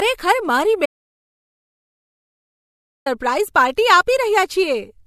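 A speech recording with two problems. Throughout, the sound carries transcoding between lossy codecs. Nothing is present above 14 kHz. The artefacts of the different codecs are heard together. That mix fits an MP3 stage followed by an AAC-LC re-encode at a lower rate. The likely cause is re-encoding a compressed file. The second encoder wasted bits copying the first one's damage and added its own. The narrower cut-off survived. Then comes an audio dropout to silence from 0.86 to 3.06 s. About 2.2 s vanish completely. There is no room tone, only silence. The sound stops abruptly mid-flow and resumes just as suddenly. This likely comes from a lost input, such as a brief disconnection or mute, while recording continued.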